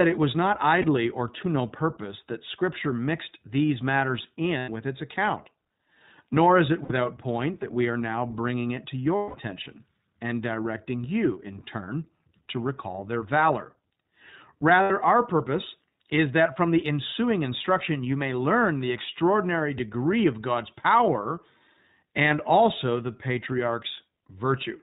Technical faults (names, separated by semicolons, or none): iLBC codec; lost iLBC frames